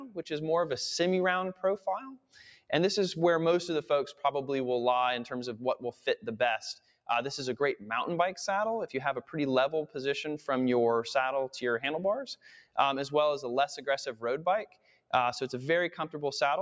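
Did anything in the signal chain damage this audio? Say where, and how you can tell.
Yes. The damage happens at the call-processing stage, where a noise suppressor tuned for speech was left running on this non-speech audio. The band-limit to 8 kHz from the call microphone processing is normal. The suppressor treats sustained tones, ambience and reverb as noise, so the gain keeps swinging by around 10 dB. Onsets come through, but held material and tails sink. On a spectrogram, energy after each attack thins out unevenly, and the waveform envelope pumps.

There are also distinct moments where the noise suppressor cut sound much harder than elsewhere: 0.0–0.2 s, 1.54–1.87 s, 2.13–2.36 s, 5.93–6.25 s, 6.79–7.09 s, 12.35–12.77 s and 14.66–15.13 s. The drops range from about 11 dB to about 18 dB, with the deepest at 2.13 s and 14.66 s. The waveform shows clear dips in these spans, and on the spectrogram the decaying energy is chopped off abruptly while transients survive.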